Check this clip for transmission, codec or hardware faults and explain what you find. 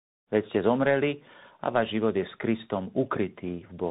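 One fault runs through the whole recording: tandem speech coding. The speech passed an AMR-NB coder, then 64 kbit/s G.711 A-law, then 64 kbit/s CVSD. Each speech codec re-coded the previous one's damaged output, so their errors stack. The result sounds rough, muffled and warbly. On a spectrogram, energy stops sharply at 3.8 kHz, and harmonics look smeared and unsteady. The fade-in near the start is smooth and clean.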